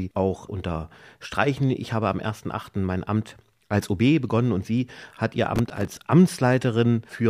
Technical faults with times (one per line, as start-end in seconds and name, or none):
5.56-5.97 processor overload crackle